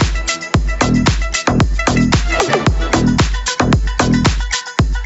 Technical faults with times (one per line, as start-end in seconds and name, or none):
0.00-5.06 gain pumping